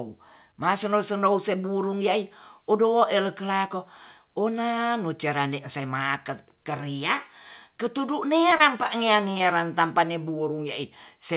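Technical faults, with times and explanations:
8.50, 8.58 and 9.38 s: short concealed packet loss. Just after "keriak ketudu" come two brief smears, each about 40 ms long, and a third follows at 9.38 s. In each case about 20 ms of audio arrived too late for the decoder. The receiver filled the gap by extending the preceding sound, then blended back into the real signal. That patch is what causes the wobble. It sits inside narrowband audio with nothing above 4 kHz, which fits a G.711 call.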